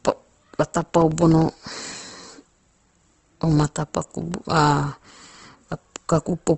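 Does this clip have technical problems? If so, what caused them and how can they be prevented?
Yes. Opus compression is likely behind the rough, grainy texture through the whole speech clip. Nothing is left above 8.2 kHz, and fine detail turns noisy, which fits a low bitrate near 16 kbps in the music mode. Encode at a higher bitrate to prevent this.

Periodic USB or driver dropouts run from 0.71 s to 4.32 s. Every 0.1 s, about a millisecond of audio is replaced by silence. A blocked bus or driver causes this, and it is heard as a steady train of ticks. Use larger buffers and stop background tasks that poll the device.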